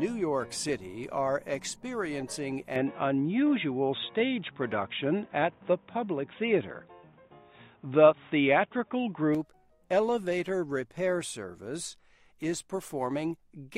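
The input likely switched to a poorer device from 2.76 to 9.35 s, with no gap: the sound turns dull and boxy with nothing above 3.8 kHz, shifts in level by roughly 5 dB, and gains a faint new noise floor.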